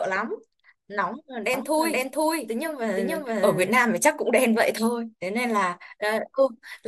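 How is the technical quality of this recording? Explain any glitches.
The speech carries one clear glitch, a doubled audio track. From 1.54 to 3.78 s a second full-band copy runs about half a second behind at roughly equal loudness, likely from a slower capture path or misaligned edit. Unlike an echo, it has no decay or room colour and begins and ends abruptly.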